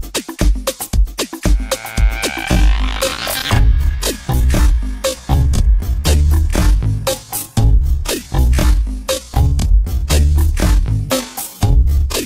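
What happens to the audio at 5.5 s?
At 5.5 s you're inside a time-stretched section that runs from 2.45 s to the end at 12.25 s. The pace drops to about half speed (0.515×) while the pitch holds, so it drags. That's likely software stretching the audio by repeating short chunks to keep the pitch.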